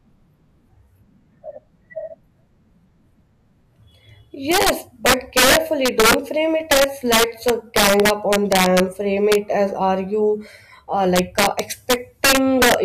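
Violent, harsh cracks break through the loud parts of this speech clip at 4.52–4.70 s, 5.06–6.14 s, 6.71–8.80 s, 9.32 s and 11.16–12.74 s, sharper and uglier than ordinary clipping. This is integer overflow: the level was pushed about 1 to 9 dB past the largest value the integer format can hold, and instead of being capped, each over-limit peak wrapped around to the opposite extreme.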